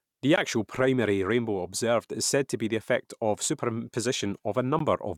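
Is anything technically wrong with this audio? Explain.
Yes. Two short Bluetooth dropouts break up the speech, at 0.36 s and 4.79 s. The first comes just before "actual primary rainbow observed". Each is a hole of about 14.5 ms where the sound vanishes and then comes back. A gap of that length fits one lost packet. The likely cause is audio data reaching the headphones too late, so the output went silent and then resumed where the sound would have been.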